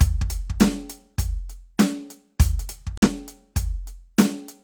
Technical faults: corrupt frame muted

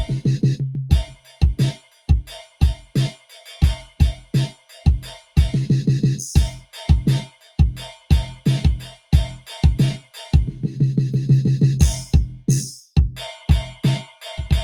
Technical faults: noise suppressor applied to music or sounds; sound cut by the noise suppressor

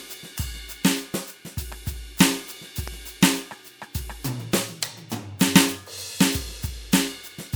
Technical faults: loud pop

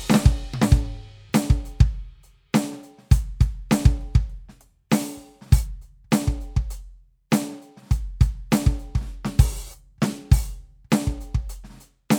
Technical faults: none

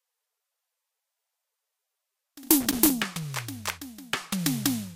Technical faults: loose connector crackle

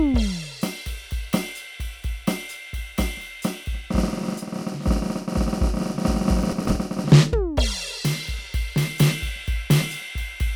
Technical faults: processor overload crackle

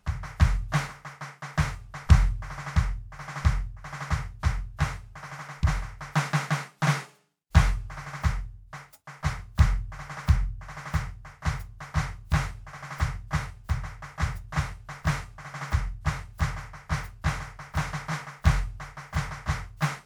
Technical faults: none

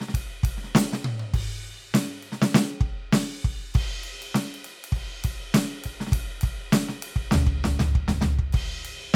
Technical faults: none

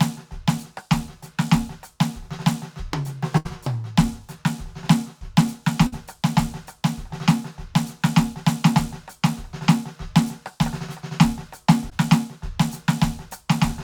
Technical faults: burst of packet loss; short concealed packet loss

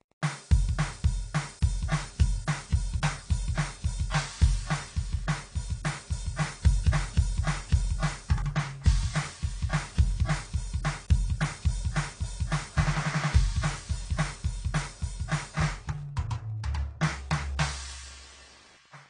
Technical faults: Wi-Fi interference; transcoding between lossy codecs

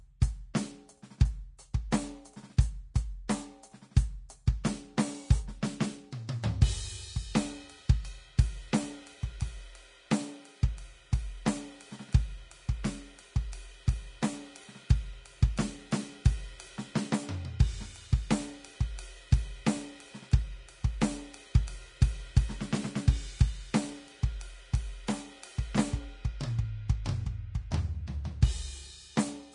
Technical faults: Vorbis compression; pre-echo

